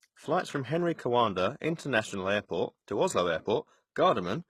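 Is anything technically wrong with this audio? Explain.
Yes. Throughout the speech there is plainly audible damage from what is likely HE-AAC compression at a very low bitrate, consistent with roughly 16 kbps. Only the lower spectrum is truly coded. The treble is rebuilt by copying lower bands upward under a coarse envelope, so its harmonics don't align with those below, and s sounds come out gritty, metallic or lispy. On a spectrogram, the upper region looks smeared and repetitive, and nothing appears above 12.3 kHz.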